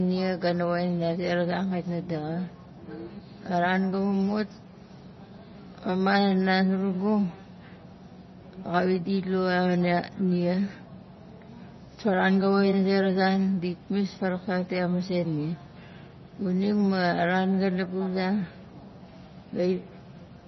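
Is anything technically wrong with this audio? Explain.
Yes. Throughout, the speech sounds watery and swirly with nothing above 5.9 kHz, likely from heavy MP3 compression. That fits a bitrate near 24 kbps, where the encoder drops the treble and flickers weak frequency lines.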